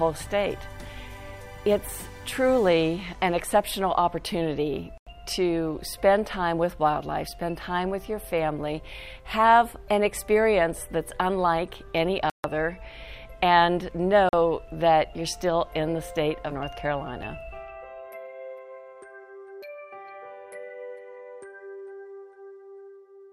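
At 4.98, 12.30 and 14.29 s the sound drops to dead silence for about 91, 143 and 41 ms, then carries on. That's a Bluetooth stall, likely interference delaying packets so the headphones' buffer ran empty until resends arrived.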